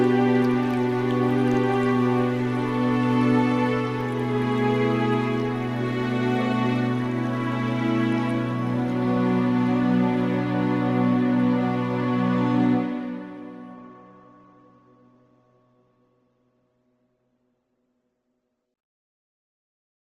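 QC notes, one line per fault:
13.75–20.18 s, adaptive stream at a lower bitrate: the stream abruptly switches, without a gap, to a leaner encode, which fits a drop from roughly 64 to 16 kbit/s Opus. Codec artefacts rise.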